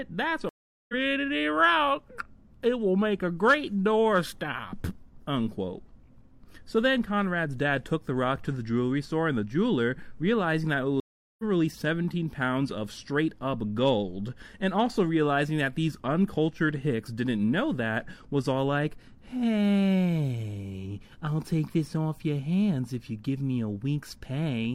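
At 0.49 s the sound drops out until 0.94 s, a gap of about 0.4 s. This is a stream reconnect. The connection broke, the player fell silent, then joined the stream again with a fresh decoder. Playback does not pick up where it stopped. It resumes roughly a third of a second further on, so a short stretch is skipped. The same stream reconnect happens from 11.00 s to 11.43 s, again with about 0.39 s of silence and a similar forward jump.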